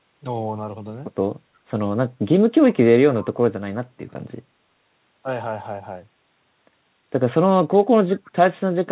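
Near the end, from 8.25 to 8.31 s, a very faint, delayed copy of the speech surfaces about 349 ms after the original: an echo leak, likely from a far-end loudspeaker whose echo canceller let residual pickup through. Unlike room reverberation, it is a distinct, separated repeat rather than a smooth tail, heard within audio that stops at 4 kHz.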